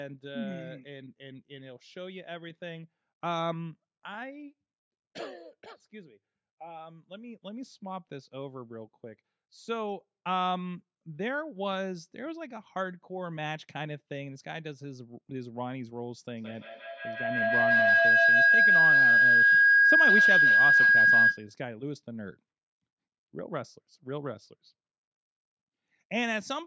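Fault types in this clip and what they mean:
Feedback howl: from 16.38 to 21.56 s a tone near 1.5 kHz swells out of the speech, peaking about 12 dB above it, with the loop repeating roughly every 150 ms. Two devices in the same room on one call are feeding each other, so the microphone-to-loudspeaker loop returns each pass a little louder. The repeats narrow onto the frequency the loop favours and keep climbing until the loop is broken.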